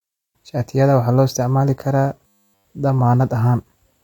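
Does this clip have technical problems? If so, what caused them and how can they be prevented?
Yes. From 2.27 to 2.65 s, just after "waxaa loo isticmaali karaa", the speech turns into a rigid 100 Hz metallic buzz. This is robotic sound from repeated short buffers: a roughly 10 ms fragment is likely being looped while incoming audio is entirely skipped. Larger jitter buffers and steadier network or processing throughput prevent it.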